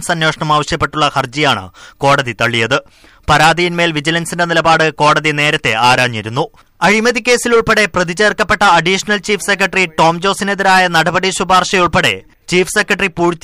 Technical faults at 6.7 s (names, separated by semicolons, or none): hard clipping